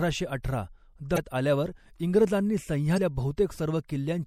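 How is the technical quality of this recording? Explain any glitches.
The technical quality is compromised: the speech carries a constant watery, swirly coloration with dulled treble, and two brief glitches interrupt it.

Throughout, sibilants sound metallic and smeared, likely from MP3 compression at a low bitrate around 64 kbps, where the encoder trims high frequencies and drops weak detail frame by frame.

From 1.14 to 1.18 s and again from 2.94 to 2.98 s, a short chirp or blip breaks in. This is damaged data in a compressed stream: the decoder misreads the corrupted frames, loses sync and searches for the next frame header.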